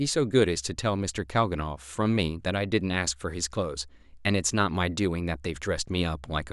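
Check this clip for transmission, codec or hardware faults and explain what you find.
Nothing faulty turns up anywhere in this speech recording. There is no fault here to locate or explain.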